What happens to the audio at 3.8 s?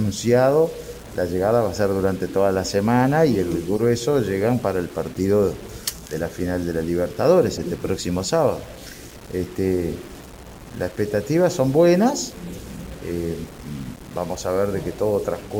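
At 3.76 to 3.81 s a corrupt frame was decoded: flipped bits in the compressed stream reached the decoder, which played the damaged data instead of concealing it. For about 50 ms, spanning what sounds like several consecutive frames, misread gains and codes put energy at the wrong frequencies. The result is a short squeak or burst of noise that does not belong to the surrounding sound, peaking at around -15 dBFS.

Underneath that burst, as everywhere in the clip, the signal carries a grainy distortion that moves with the sound. The likely cause is low bit depth without dither. Rounding to very few steps, something like 6 bits, makes the error follow the waveform instead of forming a steady hiss. The distortion sits only around 25 dB below the signal, so quieter passages turn rough and gritty.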